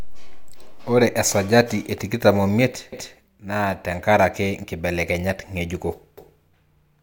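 Speech clip with overlapping chunks: at 2.93 s and again at 6.18 s, a 250 ms stretch replays because each 3-second chunk begins before the previous one ends. The first stutter lands just before "naa tenkaraki nkibelekenyat ngejuko", the second just after it.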